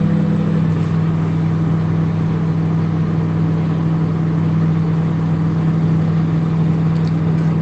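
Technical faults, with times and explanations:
No technical faults are heard anywhere in the audio.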